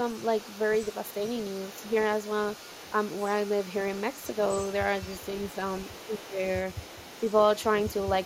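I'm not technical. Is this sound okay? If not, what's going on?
No, not quite. Throughout the whole clip there's the other side's voice leaking through: a faint second voice sits underneath the main talker. It's likely that their device plays the far end on a loudspeaker and the echo canceller isn't fully removing it from the microphone.

From about 5.9 to 6.4 seconds, you're hearing speech suppressed in double talk. The main voice suddenly gets noticeably quieter for a moment. Most likely both people talked at once, and the echo canceller, unable to tell them apart, turned everything down briefly.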